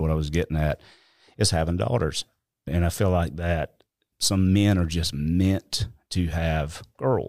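No technical faults can be heard anywhere in the recording. Nothing in the signal path calls for comment across the whole of the speech.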